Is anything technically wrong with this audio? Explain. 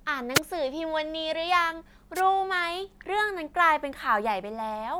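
Yes. At 0.34 to 0.40 s and 2.15 to 2.21 s, wireless microphone noise hits: the FM radio link fades, letting receiver noise surge into brief static bursts over the speech.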